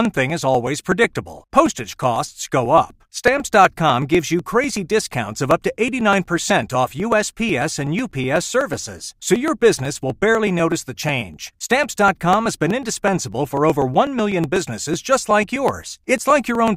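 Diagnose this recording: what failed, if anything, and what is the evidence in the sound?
Periodic USB or driver dropouts at the driver stage. From 0.05 to 16.68 s, ticks recur every 0.124 s in the speech. Each skips about a millisecond of audio.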